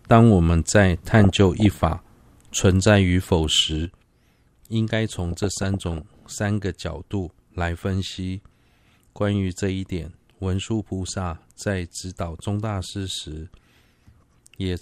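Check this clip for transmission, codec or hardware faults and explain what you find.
Two kinds of fault are audible in this speech: DAB burbling in two bursts, and a sudden gain jump that persists to the end.

DAB burbling occurs from 1.12 to 1.92 s and again from 5.32 to 6.25 s. Weak reception let bit errors, roughly half a percent to under one percent, slip past error correction into the MP2 stream. Corrupted samples and scale factors make individual sub-bands leap in level frame by frame, heard as squelchy, bubbling chirps laid over the speech. The second burst points to more damaged frames than the first. On a spectrogram these show as scattered rectangular blocks, each confined to one sub-band and one frame's duration.

The sudden gain jump happens at 3.85 s, when the whole signal, speech and background noise alike, drops by about 8 dB in a single step and stays at that lower level until the clip ends. 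The likely cause is a digital gain setting or bit shift applied instantly, with no ramp between the old and new values. On the waveform the envelope steps down abruptly at that point, and on a spectrogram every frequency darkens together along a sharp vertical boundary.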